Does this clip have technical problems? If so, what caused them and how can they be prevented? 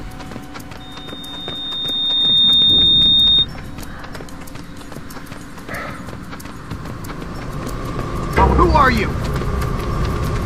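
Yes. Loudspeaker feedback squeal from 0.80 to 3.47 s: a 3.7 kHz tone swells over roughly a second and a half, ending about 10 dB above the sound. Keep microphones away from and behind loudspeakers, and lower gain or notch out the ringing frequency.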